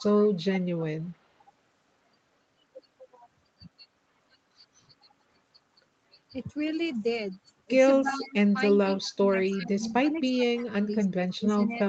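From 0.0 to 0.29 s a faint delayed copy of the speech sits about 20 dB below the main signal, trailing it by 321 ms. This is an echo leak, likely from a far-end loudspeaker whose echo canceller failed to remove everything its microphone picked up and sent that residue back.

Between 8.02 and 11.77 s the speech repeatedly dips, by as much as roughly 20 dB, for around two seconds in total. This is speech suppressed in double talk: with both sides talking at once, the echo canceller likely could not separate the local talker from the loudspeaker echo and attenuated both. Within that stretch the echo leak returns at the same 321 ms delay, from 8.05 to 8.35 s at about 20 dB down, from 8.74 to 9.11 s at about 30 dB down, and from 9.5 to 10.36 s at about 25 dB down.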